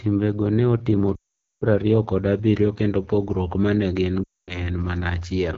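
The whole clip runs through the AMR wideband (HD Voice) codec at a low rate, which fits the 8.85 kbit/s mode. The speech is plainly rough and raspy throughout, because the pulse-driven vocal tract model doesn't have enough bits to follow the voice cleanly.

Lost AMR speech frames hit twice. At 1.16 to 1.63 s, right after "ne otimo", the decoder reuses the last good settings with falling gain, so the sound smears briefly and drops to silence. Then it comes back rough. The same happens at 4.24 to 4.67 s, after "kendo pogruok ma ne".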